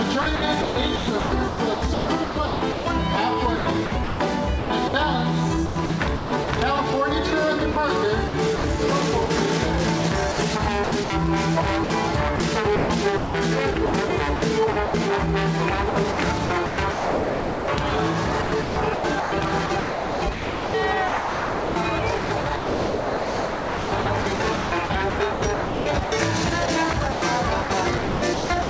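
From 0.22 to 6.48 s, 7.72 to 9.30 s, 10.32 to 14.94 s and 15.90 s to the end, the sound turns choppy, with quiet edges dropping into a hiss. About 2.1 s, 0.22 s, 0.9 s and 6.2 s are filled this way. This is likely sound chopped by the voice detector, whose repeated switching let comfort noise stand in for quieter passages, heard over a call path band-limited to 8 kHz, which fits G.722.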